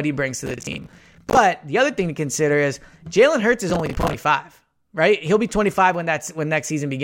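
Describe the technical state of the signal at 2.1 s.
At 2.1 s the speech signal is intact, with no audible technical fault at that moment.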